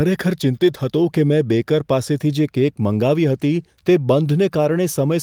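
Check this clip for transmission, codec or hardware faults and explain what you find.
No transmission, codec or hardware faults are audible here.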